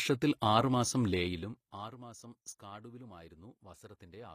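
A short speech recording with plainly audible codec damage from start to finish. The upper spectrum does not sound like the real thing. Sibilants come out gritty and metallic, and the treble has a synthetic sheen. This is likely HE-AAC compression, probably the v2 variant at a low bitrate around 24 kbps. The codec keeps only the lower bands. It rebuilds the treble by copying them upward, so the harmonics do not line up. Nothing appears above about 20.6 kHz.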